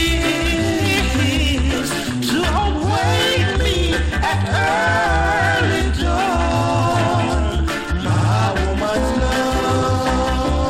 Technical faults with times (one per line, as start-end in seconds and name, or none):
8.14-8.28 repeated frames